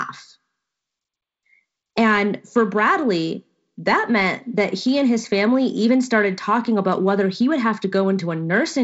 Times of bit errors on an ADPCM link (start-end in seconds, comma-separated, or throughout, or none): none